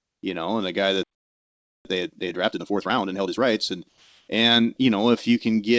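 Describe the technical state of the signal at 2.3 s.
Hurried speech at its normal pitch: time-compressed catch-up from 1.85 to 3.47 s, where the player trims and cross-fades small pieces to run about 1.5 times faster after a stall.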